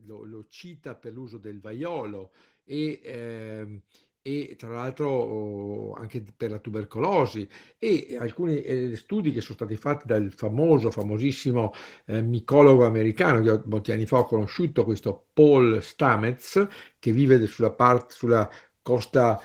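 From 0.05 s to 12.37 s the automatic gain rises: the gain control judged the input too quiet and kept turning it up, about 21 dB in all, with the voice and the background noise swelling together rather than the speech alone getting louder. The climb ends just before "americano che molti anni". On a waveform the envelope widens steadily across those twelve seconds; on a spectrogram the whole picture, including the noise floor between phrases, brightens gradually.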